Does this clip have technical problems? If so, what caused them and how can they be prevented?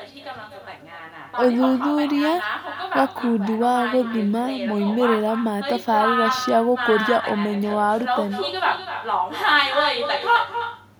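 Yes, there's echo with no canceller running through the whole clip: the far end's loudspeaker feeds back into its microphone, so every phrase returns roughly a third of a second later, about 9 dB down and thinner. Enabling acoustic echo cancellation there, or using headphones, prevents it.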